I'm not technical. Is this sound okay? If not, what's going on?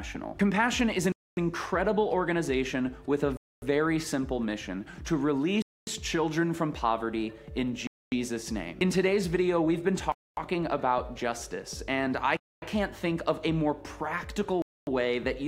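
No. The sound keeps dropping out for a quarter of a second at a time. This is called a gap between chunks. The audio was handled in pieces about 2 seconds long, and a silent hole got left at each join. Nothing is missing, but the flow stops and restarts sharply. You hear it at 1.12, 3.37, 5.62, 7.87, 10.12, 12.37 and 14.62 seconds, a steady beat roughly every 2.25 seconds.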